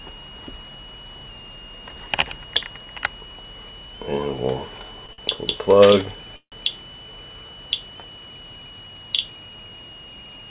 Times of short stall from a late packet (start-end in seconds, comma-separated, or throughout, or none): 5.06-5.20